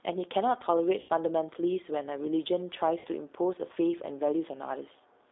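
Speech carried over a G.729 codec path, with the band confined to roughly 300 Hz to 3.7 kHz and the rough, synthetic texture of an 8 kbit/s pulse-excited model plainly audible. Nothing above the line band survives, and the vocal quality sounds reconstructed rather than captured. VoIP packet loss concealed by the speech codec occurs from 1.01 to 1.12 s, about 80 ms missing, consistent with four 20 ms packets, and from 2.99 to 3.08 s, about 60 ms missing. In each gap the decoder repeats its last pitch and filter at falling gain, producing a brief fading smear, and the voice stays weak or distorted for a while after packets return.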